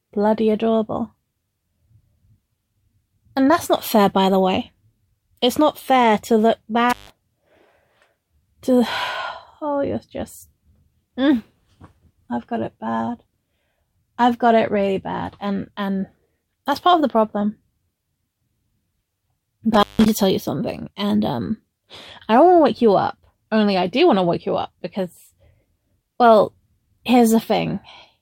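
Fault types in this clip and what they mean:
Intermittent contact: A loose cable or plug briefly loses its connection, so the signal drops out. It happens twice here. The first break falls between 6.90 and 7.11 s, with the sound gone for about 146 ms. The second falls between 19.74 and 20.09 s, with a gap of about 164 ms. Each dropout has crackle at its edges as the contact scrapes open and shut. The sound then returns abruptly.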